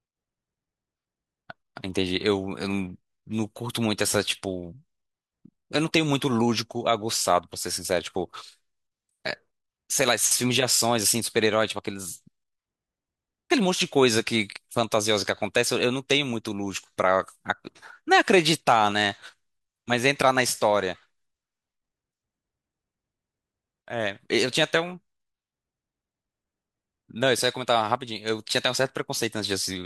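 No technical faults can be heard anywhere in the speech recording.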